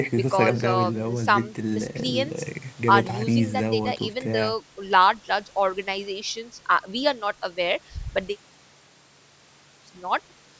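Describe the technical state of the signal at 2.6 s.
At 2.6 s the speech is intact, with no dropout, distortion or other fault, only the ordinary call microphone processing that trims the lowest bass and leaves nothing above 8 kHz.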